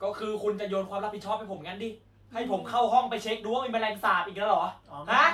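No technical faults can be heard in the speech.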